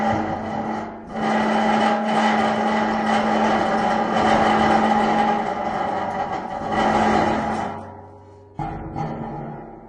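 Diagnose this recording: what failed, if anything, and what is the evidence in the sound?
Adaptive stream at a lower bitrate, from 6.98 s to the end at 9.88 s: a network-driven quality switch. The sound abruptly loses everything above 9.8 kHz, with no gap, and codec artefacts rise, which points to the player dropping to a much lower-bitrate AAC rendition when throughput fell.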